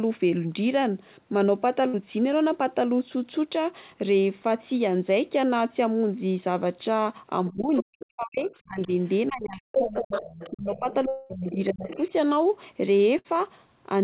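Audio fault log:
1.88–1.96 s and 13.19–13.27 s, burst of packet loss: each time about 60 ms of consecutive audio never reached the player. The receiver stretched the last sound for about 55 to 60 ms while fading it out, giving a brief held buzz or hiss. Playback then resumes with that stretch missing.
7.51–8.90 s and 9.28–11.90 s, speech suppressed in double talk: the talker's level drops sharply, by up to about 40 dB in the first stretch and about 30 dB in the second, for roughly one and two seconds in all. This is likely an echo canceller that could not separate the talker from the loudspeaker echo while both sides spoke, so it turned everything down.
7.61–8.06 s, 8.45–9.08 s, 9.72–11.54 s and 11.88–12.03 s, other side's voice leaking through: a second voice is audible under the talker at about 10, 25, 5 and 15 dB below the main speech. The longest and strongest scrap is the one from 9.72 s. 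The likely cause is an echo canceller that left part of the loudspeaker playback in the microphone signal.
11.08–11.33 s, long network dropout: about 210 ms of audio was lost. The receiver filled the whole gap with a fading continuation of the last sound, and there is no true silence. The sound then resumes further on. The likely cause is a stretch where no packets arrived at all, which is longer than a short packet burst.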